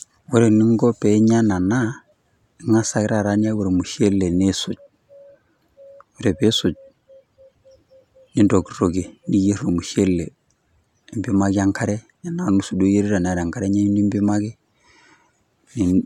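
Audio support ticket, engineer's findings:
No technical faults found in the speech recording; the signal path shows nothing that needs investigating or fixing.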